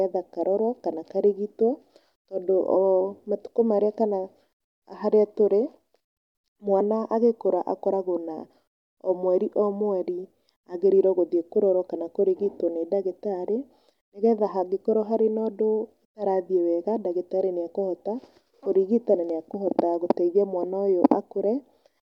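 Nothing goes wrong anywhere along this stretch of speech, so there's no technical fault to point out.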